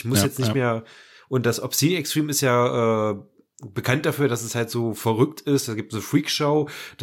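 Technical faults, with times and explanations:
No technical faults can be heard in the speech.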